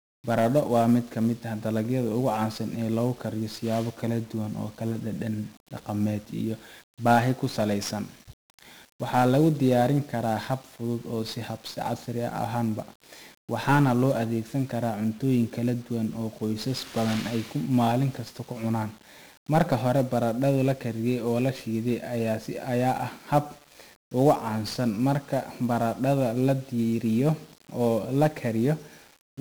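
From the first second to the end, the speech carries the sound of 1-bit DFPWM compression, and the damage is heavy. Each sample is reduced to a single bit that only nudges an adaptive level up or down, so the signal is rebuilt as a coarse staircase. The result is a dense, broadband quantisation noise that makes every syllable fuzzy and crackly, with the upper frequencies sunk under hiss. The grain fits a 1-bit stream running at about 48 kbps.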